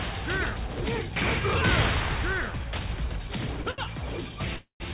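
At 3.62 to 3.67 s and again at 3.71 to 3.80 s there is a short stall from a late packet. Each time a packet missed its slot, so the jitter buffer ran dry and the receiver held the last sound for about 27 ms and then 71 ms until the data arrived. The audio then resumes exactly where it left off, with nothing lost. What sets these apart from a freeze is their length: each is a brief smear or slight buzz, never dropping into silence.

From 4.56 to 4.82 s comes a call audio freeze, with the same pattern of nothing missing but drawn out much further. About 236 ms is filled, and the held sound decays into roughly 120 ms of silence before the audio picks up again from the same point. The fill fading to silence is the sign that this is a freeze rather than a short stall. The likely cause is packets held up in transit long enough to empty the buffer.

The band stops at 4 kHz, which fits a 64 kbps G.711 mu-law call path.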